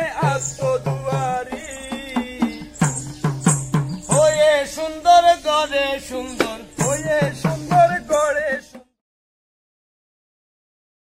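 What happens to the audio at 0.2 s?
Nothing goes wrong at 0.2 s; the audio is intact there.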